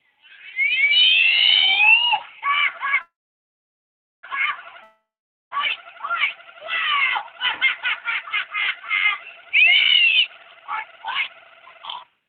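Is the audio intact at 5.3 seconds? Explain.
No. A long network dropout runs from 4.83 to 5.53 s, about 0.68 s with no new audio, so 5.3 s falls inside the gap. The likely cause is that incoming audio stopped arriving and the receiver covered the hole itself: it stretched the last sound into a fading buzz or hiss, and about 0.48 s of that span is silence. The sound returns at 5.53 s with the missing stretch simply gone.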